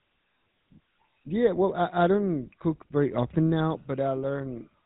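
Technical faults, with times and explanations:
Throughout, GSM full-rate codec: buzzy, gravelly roughness with nothing above 4 kHz, as the voice is rebuilt from sparse pulses through a vocal-tract model, fitting 13 kbps.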